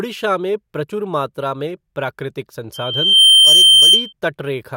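Right after "प्रचुर मात्रा में प्राकृतिक", at 2.74 s, a loudspeaker feedback squeal kicks in: the mic is hearing its own speaker, and the loop runs away at 3.1 kHz, swelling over about half a second to roughly 15 dB above the speech before cutting out at 4.13 s.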